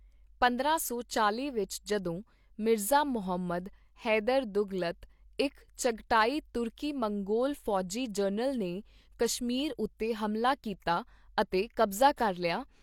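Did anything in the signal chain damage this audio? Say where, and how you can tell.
Yes. Pre-echo at 5.38 s, 11.91 s and 12.16 s is a codec fault: each sharp speech onset is preceded by a brief hiss, about 11 to 13 ms long. The transform codec spreads quantisation noise across its whole block, so noise meant for the attack leaks ahead of it.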